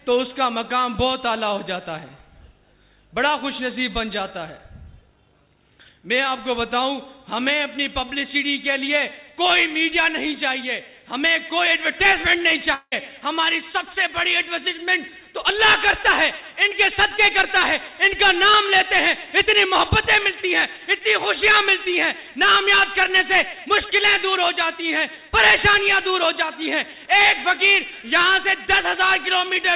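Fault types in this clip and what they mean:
Long network dropout: at 12.74 to 12.94 s the sound becomes a fading buzz, falls briefly silent and resumes with a piece missing, likely from lost packets.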